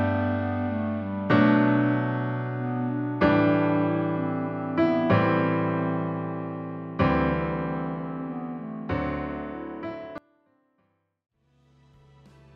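From 10.18 s, sound abruptly sinks to a faint residue about 25 dB down through the end, an audio dropout, likely from signal lost upstream.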